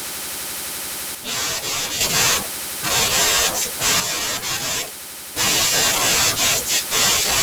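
From 1.15 to 2.01 s and again from 4.0 to 5.36 s, the speech drops abruptly by about 6 dB and jumps back just as sharply. The fixed step and hard edges, rather than a gradual fade, point to one channel likely dropping out before the mono sum.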